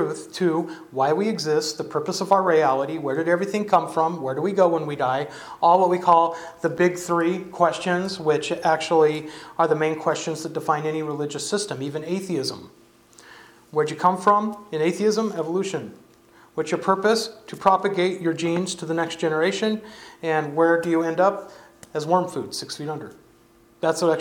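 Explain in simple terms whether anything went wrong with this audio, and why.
Chunks out of order, between 6.77 and 6.79 seconds: one 10 ms slice of sound arrived one slot late and played after its neighbour. That causes a brief jumbled moment. Unlike a dropout, nothing is missing and there's no gap, just the order swapped.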